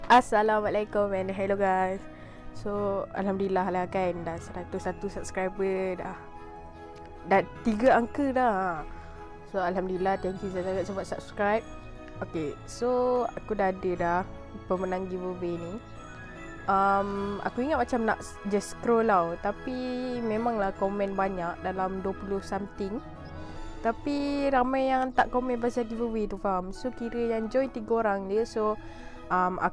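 No faults to report anywhere in the clip.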